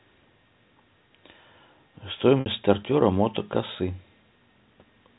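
At 2.40 s, packet loss with pitch repetition bridges a 60 ms gap, fitting two lost packets. The last pitch period loops briefly as a buzzy held tone, fading out over about 50 ms.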